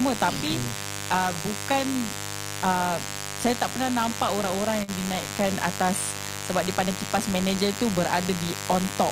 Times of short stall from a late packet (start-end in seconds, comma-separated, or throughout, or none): 4.83-4.90